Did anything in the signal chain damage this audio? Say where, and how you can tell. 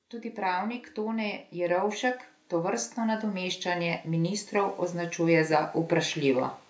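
Yes. From 0.05 s to 6.58 s the speech and the background noise swell together, ending about 13 dB louder. That is automatic gain rising in the call processing stage: the gain control judged the input too quiet and slowly raised its gain.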